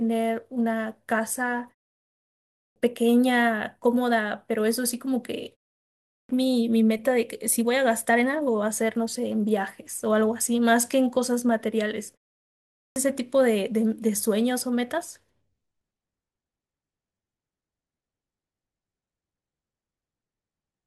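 Clipped start after a pause hits at 2.31 s, 5.90 s and 12.52 s. After a silent gap, the output device sleeps and must wake or relock, swallowing roughly 0.39 to 0.45 s of speech, so the sound starts abruptly without its opening sounds while the muted pauses themselves stay quiet.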